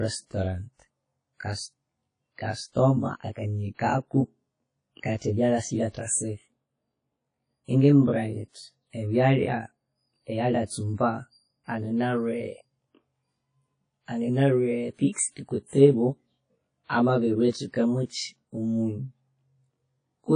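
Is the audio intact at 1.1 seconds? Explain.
No. At 1.1 seconds, as throughout the clip, one channel runs roughly 20 ms behind the other before the two are mixed to mono, producing channel delay (comb filtering). The shared speech cancels at evenly spaced frequencies from about 20 Hz upward, and a lag this long sounds rough or slightly doubled.

The audio also carries plainly audible codec damage: nothing remains above 10.1 kHz, and the sound is ringing and washy, with hiss that breathes with the speech. This is likely WMA compression from an early WMA encoder, at a low bitrate that fits around 32 kbps.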